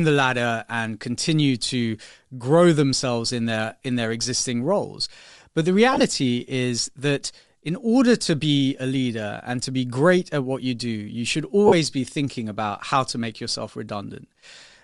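A speech recording with a breathy, grainy edge from start to finish. This is likely Bluetooth LC3 compression at a modest bitrate, which fits about 48 kbps with 7.5 ms frames. There are lost LE Audio frames at 5.93 to 6.01 s, just before "is that in order". About 52.5 ms of sound is missing, in short gaps of roughly 20 ms at most. The decoder patches each gap with a noisy smear of the previous spectrum. The same fault returns at 11.67 to 11.73 s, between "you do you should" and "be thinking about how". There it fills about 45 ms with the same smeared texture.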